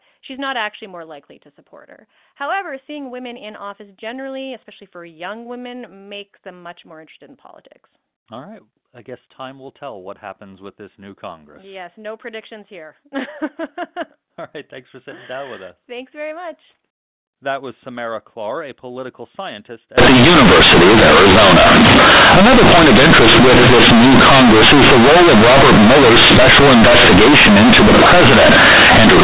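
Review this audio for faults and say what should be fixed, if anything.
From 19.98 s, right after "a political scientist", through to the end at 29.23 s, there's companded audio read as linear. The mu-law bytes are being played straight as 8-bit samples with no expansion, so every sign change swings across half the range. Quiet bits blow up as loud as loud ones, giving harsh, buzzy distortion and heavy noise in the pauses. To prevent it, make sure the mu-law stream goes through a proper G.711 expander before playback instead of being handed over as raw linear samples.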